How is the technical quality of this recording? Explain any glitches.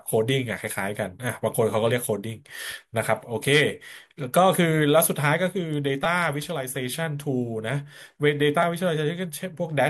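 The speech has two short glitches, both repeated buffers. At 6.04 s and again at 8.63 s, a tiny slice of audio plays over again, three extra times at the first spot and twice at the second. New audio didn't reach the output in time, so the device replayed its last chunk. The repeats are so short, which fits a 5 ms buffer, that you hear a quick click or brief buzz, not a real stutter. Nothing seems to go missing, since the sound picks up where it left off.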